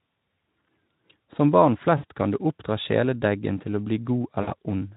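At 1.97–2.05 s and again at 4.41–4.53 s, VoIP packet loss concealed by the speech codec stretches the speech into a fading buzzy or noisy smear over roughly 60 ms of lost frames. The light Speex coding carries it, and the speech stays weak or distorted briefly afterward rather than dropping to clean silence.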